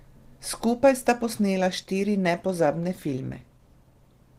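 Adaptive stream at a lower bitrate from 0.85 s to the end: the player switched abruptly, with no gap, to a lower-quality version as the connection slowed, which fits a step down from roughly 64 to 16 kbit/s Opus. The speech shows stronger codec artefacts.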